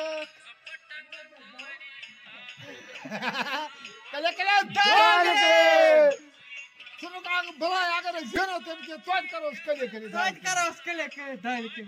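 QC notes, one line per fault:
8.36 s, repeated buffer: a very short block of audio, about 1.45 ms long, which fits a 64-sample buffer, plays five times in a row because fresh samples failed to reach the output in time and the device replayed the block it already held. Each repeat butts against the next with a hard edge, so the burst lasts about 5 ms and comes across as a single click or brief buzz rather than a stutter, with roughly that much new audio lost.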